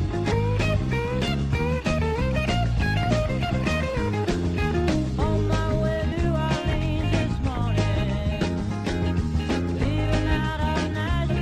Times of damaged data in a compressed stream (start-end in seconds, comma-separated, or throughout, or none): 0.30, 3.44-3.46, 6.11, 8.59-8.61, 11.29